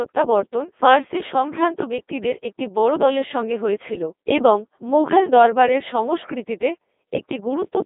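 Throughout, Codec 2 vocoder damage: speech rebuilt from pitch and envelope as sine waves, buzzy and robotic, band-limited around 250 Hz–3.6 kHz, consistent with a 2.4 kbit/s mode.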